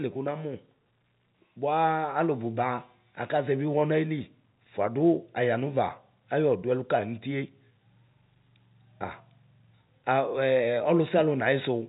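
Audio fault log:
No faults are present in the speech. The G.711 telephone coding shows in the band limit, with nothing reaching above about 3.8 kHz, which fits 64 kbps A-law.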